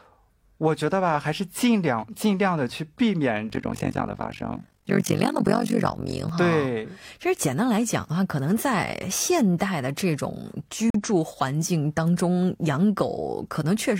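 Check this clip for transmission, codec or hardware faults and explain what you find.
Two faults stand out, one a windowing error and one a decoding dropout.

From 3.50 to 6.29 s the speech takes on a harsh, rough flutter, the level pumping around 50 times a second with swings of about 60 dB. This is overlap-add ripple: frames were windowed and rejoined with overlaps whose gains don't sum evenly, so loudness dips once every frame.

At 10.90 to 10.95 s the audio drops abruptly into about 44 ms of silence, then resumes on time. This is a corrupt frame muted: a damaged compressed frame was rejected by the decoder and replaced with silence, and the gap's length points to one lost frame.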